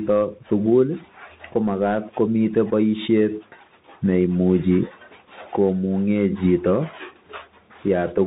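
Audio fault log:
Throughout: Bluetooth CVSD headset codec. Speech is cut off above 4 kHz; its one-bit delta steps lag loud highs, leaving scratchy s sounds and granular hiss.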